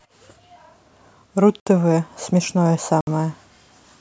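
At 1.60 s and again at 3.01 s the speech drops into a block of digital silence lasting 64 ms each time. That fits a 1024-sample output buffer left unfilled. The abrupt cut out and back with no fade leaves a short, hard-edged hole.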